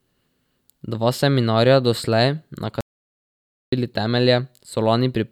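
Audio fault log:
2.81–3.72 s, audio dropout to silence: the speech cuts off abruptly and returns just as suddenly about 0.92 s later. The gap is silent, with no room tone, hiss or background left underneath. Whatever was said in that stretch is simply missing. The cause is likely a momentary loss of the input signal, from a disconnect, a failed link or a mute, while the recorder kept writing zeros.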